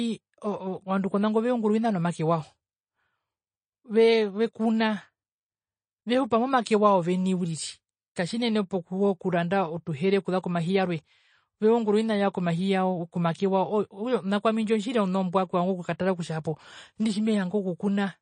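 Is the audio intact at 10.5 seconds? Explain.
No, at 10.5 seconds the speech sounds watery and swirly with nothing above 9.3 kHz, as throughout, likely from MP3 compression at a low bitrate, around 32 kbps, which cuts the treble and zeroes weak frequency lines.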